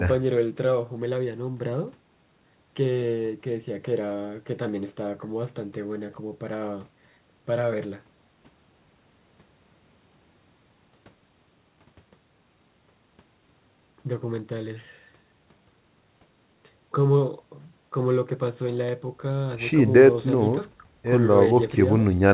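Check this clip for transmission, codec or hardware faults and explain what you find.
No transmission, codec or hardware faults turn up in this speech. Nothing reaches above 4 kHz, the narrowband sound of a telephone-grade call path, which fits G.711 A-law coding.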